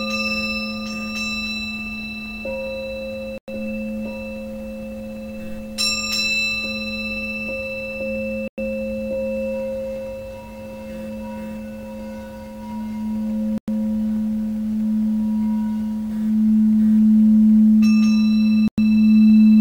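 At 3.38, 8.48, 13.58 and 18.68 s the sound drops out for 100 ms each time, a gap between chunks. The audio seems to have been delivered in 5-second blocks, with silence inserted at every join rather than anything being lost, so each hole lands about 5.1 s after the last. Each is heard as a brief, hard-edged stutter. On the waveform it shows as a flat silent strip with abrupt walls, and on the spectrogram as a clean vertical blank band.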